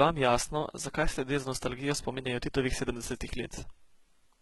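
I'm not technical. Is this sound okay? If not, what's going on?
No. HE-AAC compression damage runs through the whole clip, from start to finish. The treble on this speech, especially s sounds, comes across gritty, metallic and lispy. The likely cause is heavy compression that keeps only the lower part of the sound and then fakes the upper part by copying lower tones upward and roughly shaping them. That rebuilt treble doesn't match the real one, so the bright edges sound artificial.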